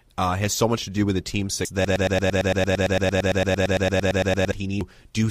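A speech clip marred by two short glitches, one at 1.65 s just after "do with the team's" and another at 4.81 s; this is damaged data in a compressed stream, where corrupted bytes made the decoder misread frames, lose sync and jump to the next frame header. From 1.85 s to 4.52 s, a 113 ms fragment repeats 24 times back to back as a broken-record loop, likely because the stream stalled and kept resending its last buffered piece, so the audio meant for that span is lost.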